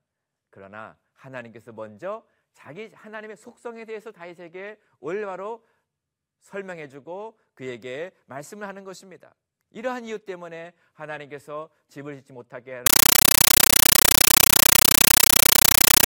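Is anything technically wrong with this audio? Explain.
Yes. From 12.86 s to the end, a compressed stream is played as audio: an undecoded bitstream, likely AC-3, is treated as samples. The speech gives way to loud chattering static, 9.3 ms noise bursts repeating 31.25 times a second.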